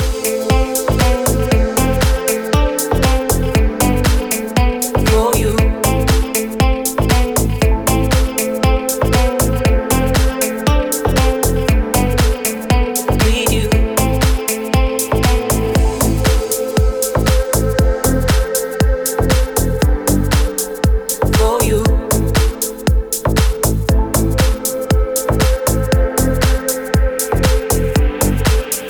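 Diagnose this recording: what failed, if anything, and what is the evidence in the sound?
Nothing failed; no stage shows any audible fault.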